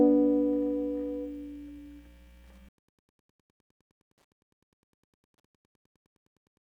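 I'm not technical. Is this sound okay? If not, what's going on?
No. Throughout the music there is Wi-Fi interference: a nearby wireless radio's beacon, sent every 102.4 ms, leaks into the audio circuit as a faint, steady ticking about ten times a second. Mains hum would be a continuous low drone instead of regular ticks.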